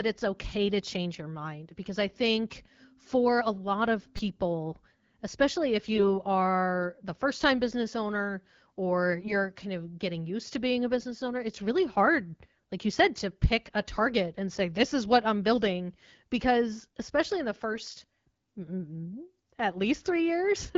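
At about 4.18 s there's a repeated buffer. Fresh audio didn't reach the device in time, so it replayed its last tiny chunk three extra times, which fits a 5 ms buffer. Because the piece is so short, it comes across as a quick click or buzz rather than a stutter.

Then come AMR bit errors, where a weak link flipped some of the less protected bits while the frame still passed its check. The first is from 5.94 to 6.06 s, between "especially if" and "are the first time". The second is from 9.21 to 9.37 s, between "time business owner or" and "kind of getting used". The last is from 17.72 to 17.80 s, right after "especially in the". The error rate is a few percent, hitting a handful of frames each time. The speech keeps its rough pitch and level but goes briefly hoarse and gargly, since the excitation pulses and the finer parameters land wrong. All this sits on top of an AMR-WB stream at 12.65 kbit/s.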